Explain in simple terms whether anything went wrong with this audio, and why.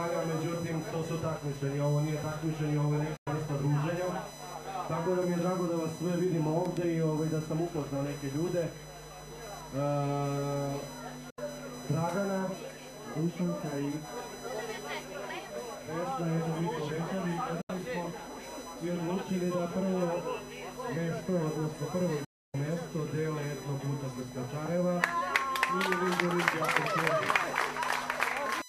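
Electrical noise from the USB connection leaked into the audio, causing USB whine: a steady, high-pitched tone built on 1 kHz, loudest around 6 kHz, running underneath throughout.

The receiver also briefly lost the digital signal, a digital broadcast dropout. The sound quickly fades to silence at 3.16 s for about a tenth of a second, at 11.30 s and 17.61 s for about 0.07 s each, and at 22.24 s for about 0.3 s. Whatever was playing in those gaps is gone.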